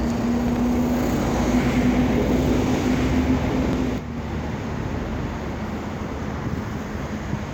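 From the start to 3.98 s, a full-band copy of the sound trails about a second and a half behind, roughly 5 dB quieter, dry, and cutting off abruptly: a doubled audio track, likely from a slower second capture path mixing in a delayed copy.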